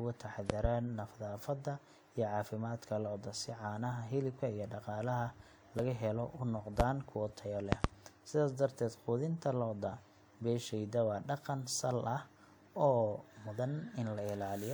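Loud pops occur at 0.50–0.67 s (two in quick succession), at 6.80–6.83 s just before "kuwo tayo", and at 7.72–7.88 s (another pair) just after it. They peak about 20 to 25 dB above the speech, which continues underneath. The likely cause is a voltage spike from a switch, static or a driver glitch.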